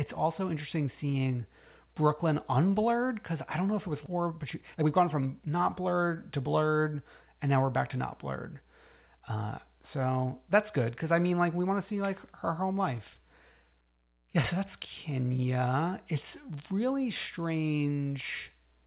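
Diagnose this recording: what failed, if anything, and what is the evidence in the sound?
Right after "know if it was", at 4.06 to 4.08 s, the speech jumps straight to later material with no gap and no fill, so roughly a second of talk is simply gone and the two edges are butted together. This is a skip ahead in the network path or at the jitter buffer: a stretch of audio was discarded while newer audio was already queued, cutting the playout delay by about a second in one step.

From 4.16 s to 6.41 s, leading up to "blurred and now we're", the talker sounds rushed but the pitch stays where it was, running about 113% of normal speed. That is a jitter buffer speed-up: holding more audio than its target, the receiver trimmed short pitch-period-sized pieces again and again, removing roughly 300 ms in total to pull latency down. The whole call path is band-limited to nothing above 4 kHz, which fits G.711 A-law at 64 kbps.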